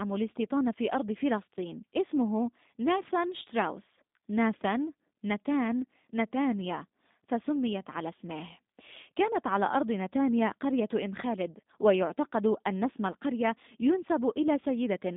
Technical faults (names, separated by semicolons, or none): G.729 codec